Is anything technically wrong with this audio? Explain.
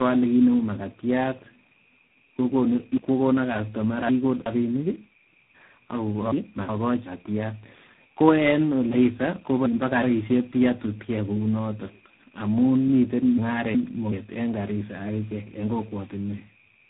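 Yes, there are two faults.

Tandem speech coding runs throughout: the speech sounds like it passed through three successive codecs, each re-coding the previous one's damage. It is rough, warbly and muffled, with nothing above 3.8 kHz.

Chunks out of order occur at 2.97–4.46 s, 6.32–7.06 s and 8.92–10.03 s. In each, a segment of about 372 ms plays one to three chunks late, producing a jumbled passage.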